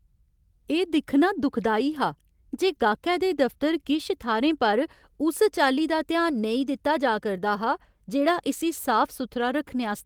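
Speech, with no technical faults heard anywhere.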